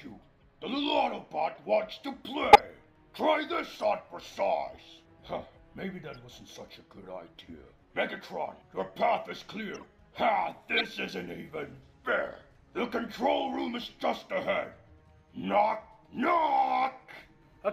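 Corrupt frames were decoded at 0.40–0.43, 1.50–1.57, 2.53–2.59, 3.73–3.76, 6.14–6.19, 7.27, 9.74–9.85 and 10.77–10.84 s. Damaged data was played as if valid. Each gives a brief chirp or noise burst. The one at 2.53 s is loudest.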